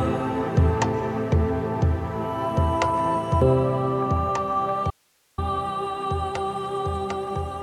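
At 3.42 s the audio has a glitch typical of damaged data in a compressed stream, where the decoder loses frame sync and resumes at the next valid header. From 4.91 to 5.38 s, roughly 0.47 s, the sound drops abruptly to faint hiss around 40 dB down, an audio dropout to a faint residue, likely a signal loss upstream while the later path stayed live.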